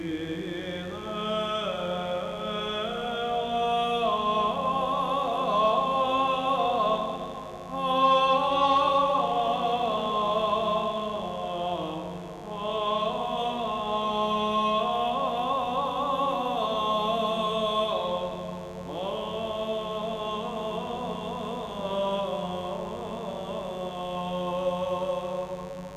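A raspy mains buzz runs throughout, built on 50 Hz harmonics from switching spikes leaking in, sitting roughly 20 dB below the sound.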